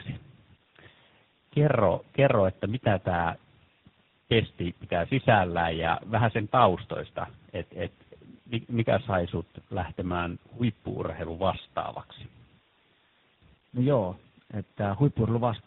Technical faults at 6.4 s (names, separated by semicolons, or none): tandem speech coding